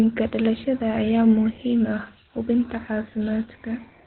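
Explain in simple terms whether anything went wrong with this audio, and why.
Opus compression, heard from start to finish: the speech sounds muffled and hoarse, with nothing above 4.2 kHz. That fits the codec likely having switched to its low-rate speech mode, which squeezes sound into a narrow, telephone-like band and roughens it to save data.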